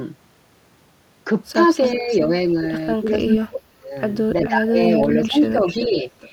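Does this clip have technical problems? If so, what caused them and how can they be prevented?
Yes. There's an echo leak: a delayed copy of the speech, about 0.38 s behind, at 1.88–2.25, 3.08–3.35, 4.44–4.48, 4.94–5.87 and 6.20–6.29 s. It ranges from roughly 25 dB down to as loud as the speech itself. It's likely a far-end speakerphone whose echo canceller isn't fully cancelling its loudspeaker. A headset, or turning the far-end speaker down, should stop it.

There's also speech suppressed in double talk. The speech dips slightly at 2.00–2.09 s, drops hard (about 30 dB) across 3.23–3.96 s, and dips by about 20 dB during 4.48–6.05 s. It's likely the canceller turning everything down when it can't separate the talker from the echo. Using headsets at both ends keeps the canceller from having to do that.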